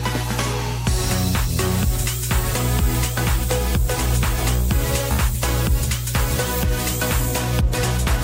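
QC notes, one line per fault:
Throughout, mains hum: a steady low tone at 60 Hz sits under the audio, strong enough to rival it at only a few decibels below the program. Power-line current is leaking into the signal path, as from a ground loop or a nearby transformer. Unlike rumble or wind noise, the pitch never drifts and the level never swells. The tone stays fixed at the line frequency, with some low harmonics stacked above it.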